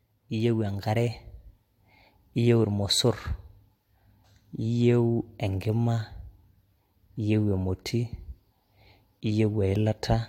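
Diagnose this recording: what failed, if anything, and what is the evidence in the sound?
Nothing in the recording points to a failure at any stage of the chain. No event in the speech calls for a diagnosis.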